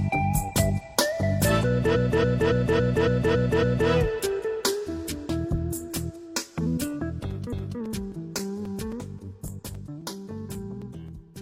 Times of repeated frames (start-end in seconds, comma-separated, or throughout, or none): 1.91-3.86, 7.48-7.76